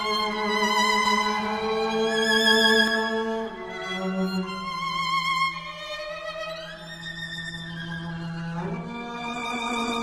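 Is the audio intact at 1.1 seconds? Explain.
No. From 1.06 to 2.88 s a doubled audio track sounds: a second, equally loud copy trails by roughly 200 ms, likely from a slower second capture path. On a waveform or spectrogram every event repeats at that offset, with no decay tail, and the copy starts and stops abruptly.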